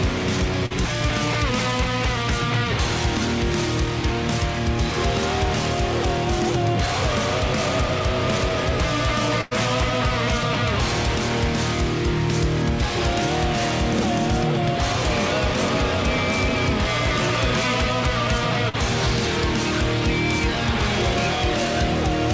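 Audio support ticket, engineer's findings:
Short concealed packet loss, 0.66 s (to 0.83 s): brief smear/wobble. About 40 ms missing, bridged by roughly 45 ms of extrapolated fill, then crossfaded back; timeline slips by a few ms. Receiver-side concealment after jitter-buffer underrun.
Short concealed packet loss, 18.69 s: same signature, about 40 ms missing, 43 ms filled.

Burst of packet loss, 9.41–9.53 s: held buzz or fading hiss, then audio resumes further on. About 100 ms missing, covered by 100 ms of concealment that attenuates as it runs. The gap is 100 ms long, so the fill decays and the content skips, unlike the two brief smears. Nothing above 8 kHz throughout, consistent with the G.722 call path.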